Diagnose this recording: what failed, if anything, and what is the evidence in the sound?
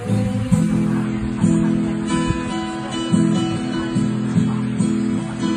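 The failure sits at the network stage, where an adaptive stream switched to a lower bitrate. At 1.05 s the quality drops abruptly with no gap, and it stays degraded to the end. From that point nothing is present above 9.7 kHz, and codec artefacts become more prominent. The switch points to a step down from roughly 96 kbit/s AAC to about 24 kbit/s. The player fetched a cheaper rendition, whose encoder discards the treble and codes the rest coarsely.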